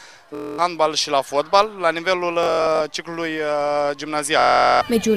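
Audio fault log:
0.35 to 4.81 s, Bluetooth stutter: three dropouts, at 0.35 to 0.59 s, 2.43 to 2.81 s and 4.40 to 4.81 s, where late or missing wireless audio made the receiver replay its last short slice. The repeated slices form a buzzing, machine-gun stutter before the sound resumes further along, skipping about 232, 232 and 418 ms. The second is broken into scattered bursts, the longest about 93 ms. This points to packets of roughly 23 ms each.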